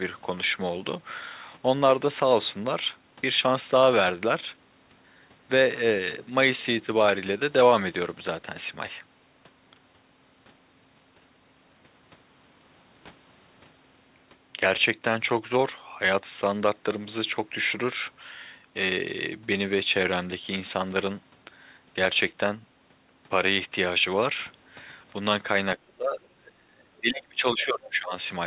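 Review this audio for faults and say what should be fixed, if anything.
Speech suppressed in double talk from 25.76 to 28.13 s. The speech dips by up to about 30 dB, likely because the echo canceller mistook both talkers for echo. Tune the echo canceller's double-talk detection so near-end speech is kept while the far end talks.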